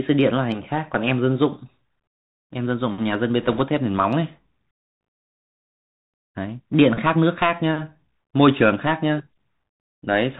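Bluetooth CVSD headset codec, throughout the clip. The speech carries the sound of a narrowband headset link: a one-bit delta modulator sends only whether each sample should step up or down, adapting the step size as it goes, at a rate that fits the 64 kbps CVSD stream. Nothing above 4 kHz survives. Sibilants turn scratchy, louder bright passages smear where the step cannot keep up, and a fine granular hiss sits under the speech.

Bit errors on a Bluetooth voice link, from 3.42 to 3.61 s. For about a fifth of a second the headset stream takes flipped bits, at a rate of around 2 percent, spread across the many short frames in that span. Because each CVSD bit moves the waveform by only one small step and the decoder recovers quickly, there are no sharp clicks. Instead a rushing, crackling noise rides over the speech and then clears.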